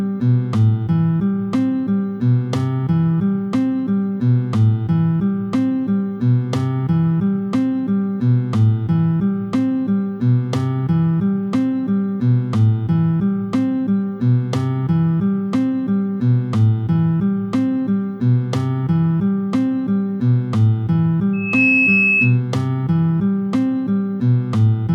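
A microphone is picking up the loudspeaker it feeds, and the loop gain climbs past one at 2.6 kHz, causing loudspeaker feedback squeal from 21.33 to 22.41 s: a single piercing tone swells in over about a third of a second, ending up a few decibels above the sound.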